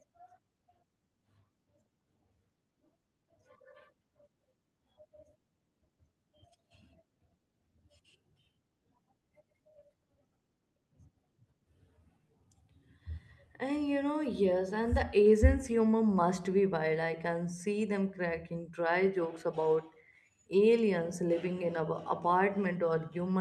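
Nothing stood out on listening to this speech recording, which carries the ordinary character of a call path with the highs rolled off above about 12 kHz.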